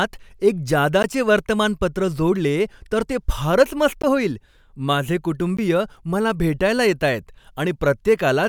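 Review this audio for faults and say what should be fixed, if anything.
Three short blocks of digital silence cut into the speech: at 1.03 s, about 14 ms long, just before "वर्तमानपत्र जोडले तर ते"; at 4.02 s, 15 ms, between "तर ते फारच मस्त" and "होईल माझे"; and at 5.57 s, 15 ms, right after "फारच मस्त होईल माझे". In each, the signal drops straight to zero and returns with no fade, and the gap registers as a brief tick. This points to the output buffer not being filled in time. To prevent it, give the audio thread enough buffer headroom and priority that it never misses a deadline.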